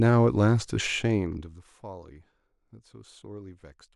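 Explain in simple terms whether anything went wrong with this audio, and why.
Between 1.07 and 1.79 s the speech gets much quieter, and a fine ticking or buzzing rides on top while the level falls. That is zipper noise. The volume was turned down in many tiny jumps, about 400 a second, instead of a smooth glide, and every jump leaves a small click. A smooth level change only alters loudness. Zipper noise adds that rough zipping texture during the change.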